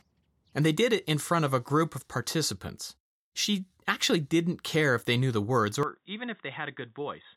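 At 5.83 s, right after "they knew the words", the speech turns dull and quieter, likely from the input switched to a poorer device, with no gap. A spectrogram shows everything above 3.8 kHz vanishing, and the waveform drops by roughly 10 dB through to the end, over faint new background noise.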